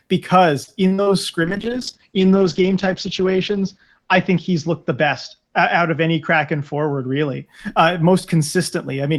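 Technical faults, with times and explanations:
0.63–1.14 s, repeated packet loss (robotic sound): the speech breaks up into four short holes, the longest about 40 ms, with roughly a third of this half-second patched over. Each dropout is filled by stretching the last bit of sound forward, and the next gap arrives before the voice settles. That repeated guessing gives the choppy texture, with small pieces of the speech simply gone.
1.45–7.52 s, call bitrate drop: the speech turns coarse and watery, and the top end collapses from a full band near 20 kHz to a ceiling around 8 kHz, so it sounds muffled. The sound fits the encoder being squeezed from about 48 kbps down to roughly 8 kbps, the low point lasting about 1.8 s. With so few bits, detail is quantised roughly and the high frequencies are dropped until the rate climbs back.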